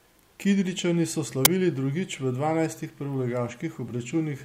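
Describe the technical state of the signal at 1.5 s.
At 1.45 s the speech is interrupted by an uninitialised buffer fault. For about 10.7 ms the output carries a loud crack instead of the speech. The duration fits a 512-sample buffer. The playback path sent that block out before any audio had been written into it, so whatever values were left in memory were played as though they were samples.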